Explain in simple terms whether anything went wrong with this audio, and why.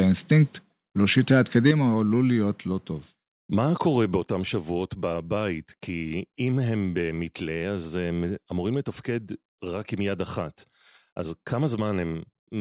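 From 1.18 to 1.71 s the loudest moments turn harsh and crackly: microphone overload. The likely cause is a microphone input set too high, so the tops of the biggest peaks get sliced off. About one percent of the sound is flattened this way, and only briefly. That is different from the dull, muffled sound of the call line itself, which carries nothing above 4 kHz throughout. Overload adds a rough edge to the peaks rather than taking treble away.

Right as that distortion ends, at 1.71 s, the whole sound suddenly gets quieter, and it does so again at 2.73 s and 4.17 s. This is the microphone volume stepped down, probably by the call software reacting to the overload and lowering the input level. Each drop is instant, like someone turning a knob in one click, and the background falls along with everything else. A voice that simply grows softer would change gradually and leave the background untouched.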